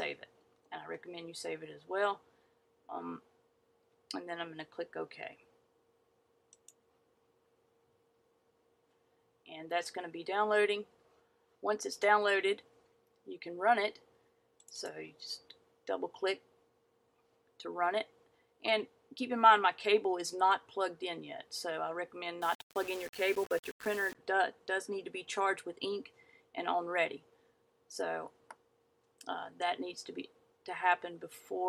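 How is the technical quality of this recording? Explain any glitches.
The recording has one clear glitch. From 22.42 to 24.15 s, the sound turns grainy and rough. This is likely low bit depth without dither. The signal seems to be squeezed to about 6 bits and rounded to the nearest step. With so few steps, the rounding error tracks the waveform. The grit sits roughly 20 dB below the signal. Quiet parts crackle or sputter between steps, and the distortion shifts as the sound changes.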